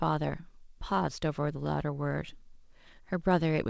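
Speech, carried over a call path whose G.722 coding leaves nothing above 8 kHz, with clock drift between sender and receiver: the sender's clock runs about 2% slow, so the jitter buffer keeps draining and the receiver must stretch the stream to avoid running dry. That stretching shows up as repeated timing corrections from 0.22 s to 3.44 s, where short pieces are repeated at uneven intervals, slowing playback to 98% speed and adding roughly 70 ms overall.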